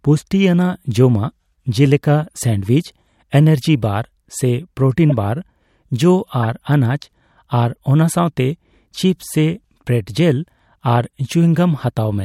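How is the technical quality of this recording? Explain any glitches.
The speech in this recording is marred by four brief glitches. All are corrupt frame decoded faults, at 2.66–2.68 s, 5.10–5.12 s (just after "ᱮᱱᱟᱨᱡᱤ ᱵᱟᱨ ᱥᱮ"), 6.43–6.45 s and 11.05 s. Flipped bits in the compressed stream were decoded as if valid, so the misread values sent energy to the wrong frequencies for each damaged frame. The first three each span a couple of frames and the last several. They are heard as short chirps or noise blips. The ones at 5.1 s and 6.4 s are loud and the others faint.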